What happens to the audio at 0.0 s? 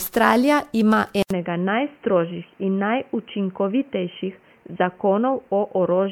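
Generation loss is present from 0.0 s and continues through the whole speech clip. The sound is swirly, smeared and hollow, with blurred attacks. The likely cause is repeated MP3 re-encoding, around ten passes at what sounds like 128 kbit/s, each adding fresh quantisation noise and spectral gaps.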